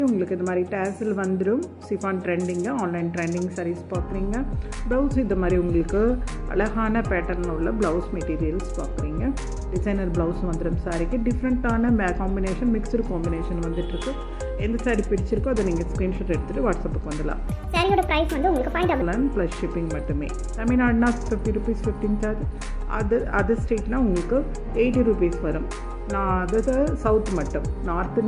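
From 17.48 to 19.02 s there's a wrong sample rate fault: the audio jumps up in pitch by about 6.45 semitones and runs 1.45 times too fast, so everything sounds squeaky and hurried. The samples are being played back faster than they were captured, with no rate conversion. That ratio fits material recorded at around 22 kHz being played at 32 kHz, which pushes speed and pitch up together.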